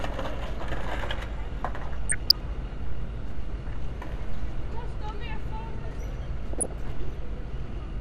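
A clip of everyday sounds with a dull, grainy, gurgling character all the way through. Upper sub-bands seem to flicker in and out while what's left sounds coarsely quantised. That's most likely MP2 compression, and plainly audible damage like this fits a rate somewhere around 80 kbps. On top of that there are two bursts of DAB burbling, from 2.09 to 2.31 s and from 6.53 to 6.67 s. Each brings short blips of noise in individual sub-bands. That's what you get when bit errors slip past the error correction into the MP2 stream, here at an error rate of roughly 0.3%, like a marginal reception patch.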